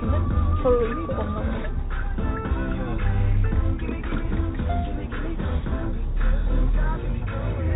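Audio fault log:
No faults; call-path audio stops around 4 kHz.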